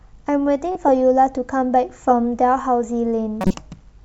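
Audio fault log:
0.72–0.89 s, corrupt frame decoded: a sharp squeaky burst of misplaced energy, peaking near -10 dBFS, cuts through the speech for about 170 ms. The decoder played frames whose bits had been flipped, so wrong gains and misread codes put energy at the wrong frequencies. The length points to several consecutive damaged frames.
3.41–3.54 s, corrupt frame decoded: a shorter, louder blip of noise near -5 dBFS lasting about 130 ms, which fits a handful of corrupted frames.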